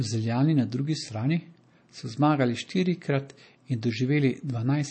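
From start to finish the speech carries plainly audible damage, likely from MP3 compression at a low rate, with the brittle, watery texture pointing to something around 32 kbps. Short of bits, the encoder discards everything above about 8.3 kHz, so sibilants lose their edge, and weak frequency lines flicker in and out between frames, giving a swirly, chirping quality. A spectrogram shows a flat ceiling at 8.3 kHz and patchy, blocky holes below it.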